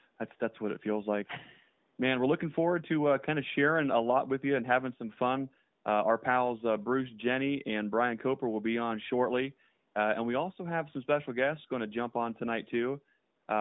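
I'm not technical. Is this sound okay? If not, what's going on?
Yes, it's fine: this is just speech carried over an ordinary mobile phone call, so it has that familiar thin phone-line sound, and nothing has gone wrong with it.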